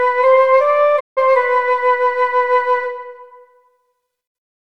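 The audio has a digital broadcast dropout from about 0.99 s to 1.19 s: the sound fades out over roughly 20 ms and goes silent, with about 160 ms of programme missing. This fits a receiver muting after several consecutive frames failed, perhaps five, until valid frames resumed.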